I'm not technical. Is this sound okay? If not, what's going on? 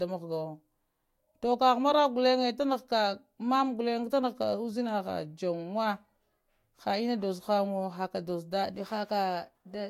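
No. From 8.63 s to the end of the clip there is a drift correction step: software keeping two clocks in sync likely jumped the playback rate to rebalance its buffer. The speech runs about 5.3% faster and its pitch rises by nearly a semitone.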